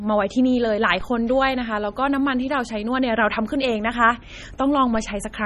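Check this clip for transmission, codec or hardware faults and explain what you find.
Two faults are present: heavy codec damage across the whole speech clip, and two DC steps.

Throughout, nothing sounds above 14.3 kHz, and the speech has a watery, swirling quality with chirpy sibilants. This is likely MP3 compression at a low bitrate, around 32 kbps, where weak frequency lines flicker on and off between frames. Unlike plain low-pass filtering, the damage shifts from moment to moment.

At 1.01 s and 4.95 s, a DC step makes the waveform's zero line jump, then drain away through a roughly 5 Hz high-pass within a few tens of milliseconds. Each gives a dull low thump under unchanged speech, lower than a sharp dropout click.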